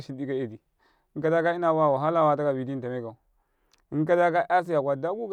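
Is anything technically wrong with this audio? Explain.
No, the recording's signal path shows no technical faults that can be heard.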